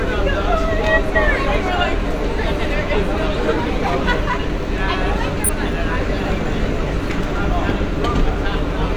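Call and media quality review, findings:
Frames out of order: adjacent runs of frames arrived swapped and were decoded in that order. Each affected stretch plays with its halves exchanged, heard as a garbled flutter. No time lost.

0.78–1.17 s: two blocks of about 186 ms swapped.
2.50–2.70 s: two blocks of about 93 ms swapped.
5.44–5.58 s: two single frames of about 46 ms swapped, pointing to roughly 46 ms codec frames.

Probable component: jitter buffer or packet reordering stage.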